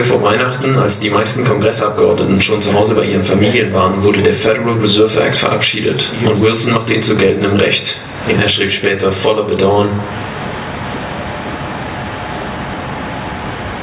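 Gain pumping runs through the whole clip. The gain ducks by about 20 dB under each loud sound, the likely result of input gain set far too high with a fast limiter clamping peaks. The waveform looks flattened, and the spectrogram shows a sharp 4 kHz ceiling.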